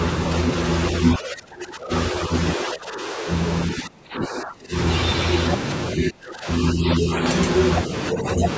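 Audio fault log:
1.17–1.92 s, 2.11–2.31 s, 2.57–3.28 s, 3.74–4.74 s, 5.95–7.11 s, 8.13–8.46 s: speech suppressed in double talk. The echo canceller likely mistook overlapping talk for echo and pulled the speech down, so it dips from slightly to sharply quieter in patches.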